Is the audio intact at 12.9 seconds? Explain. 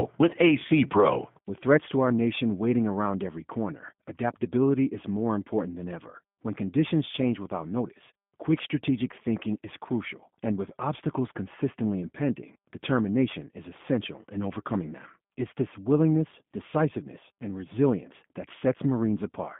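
No. At 12.9 s the speech carries G.729 codec damage, present throughout the clip. The codec rebuilds each 10 ms frame from a vocal-tract filter, pitch predictor and a few pulses, giving a rough, synthetic timbre, with the line band limited to 150 Hz to 3.5 kHz, consistent with an 8 kbit/s stream.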